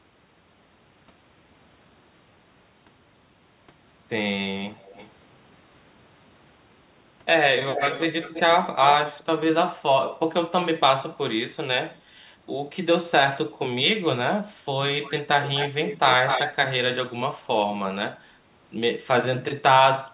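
At 4.77, 7.72, 8.22, 15.05, 15.42 and 15.87 s, a delayed copy of the speech trails behind it. The copy lags by 312 ms at first and 243 ms later. It starts faint and grows to nearly the speech's own level by 16.5 s. This is echo leak, likely from a far-end loudspeaker whose echo canceller let part of its microphone pickup return. Everything is heard through a call path with nothing above 4 kHz.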